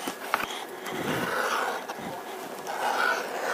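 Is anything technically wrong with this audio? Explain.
Yes. The audio was read two samples at a time, giving double speed throughout the clip. The reader treated each pair of samples as a single frame, as if the stream held two channels or samples twice as wide, so it consumed the data at 2.0 times the intended rate. The result runs twice as fast and sits an octave higher.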